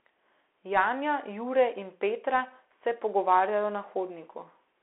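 From start to finish the speech carries the Bluetooth CVSD headset codec sound, squeezed to roughly 300 Hz–3.4 kHz, with scratchy s sounds and granular hiss, which fits a 64 kbps CVSD link.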